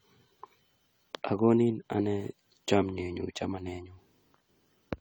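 From start to finish the speech has a swirly, hollow, smeared quality with blurred consonant onsets, likely generation loss from about four successive AAC-LC encodes near 64 kbit/s. Unlike a single low-bitrate pass, the band extends to 20.1 kHz, yet the artefacts still build up.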